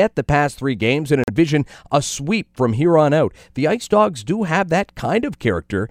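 At 1.24 s the speech cuts to silence, returning at 1.30 s, likely a Bluetooth dropout from packets not reaching the headphones in time. About 43 ms of audio is skipped, which fits two lost packets, so speech resumes further on, unlike a stall that pauses and continues.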